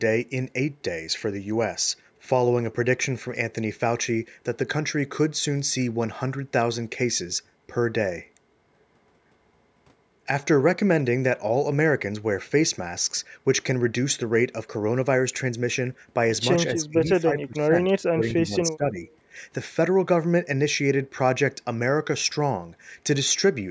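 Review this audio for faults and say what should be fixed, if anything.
From 16.72 to 18.99 s the speech dips, falling by roughly 25 dB at its deepest, with about 1.5 s of sound affected in total. This is speech suppressed in double talk, likely because the echo canceller mistook overlapping talk for echo and attenuated it. Better double-talk detection, with less aggressive suppression during overlap, would prevent it.

From 19.11 to 19.17 s a faint delayed copy of the speech appears, 257 ms behind the original and roughly 35 dB below it. This is echo leak, likely residual loudspeaker pickup that the far end's echo canceller did not fully remove. Improved echo-path modelling or a headset at that end would prevent it.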